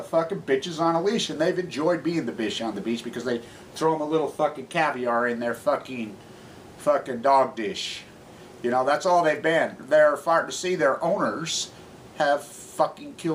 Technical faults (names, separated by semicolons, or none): none